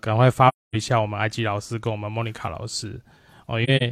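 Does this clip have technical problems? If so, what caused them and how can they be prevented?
Yes. The speech drops into soft-faded silences from 0.48 to 0.75 s, a hole of about 256 ms that fits roughly six missing frames, and from 3.64 to 3.83 s, where brief gaps of up to around 40 ms are scattered. This is AAC frame loss with muting. The decoder zeroed the spectrum of the missing frames, and the overlapping windows faded the sound out and back in. To prevent it, protect the stream with retransmission or forward error correction, or use concealment that fills lost frames instead of muting them.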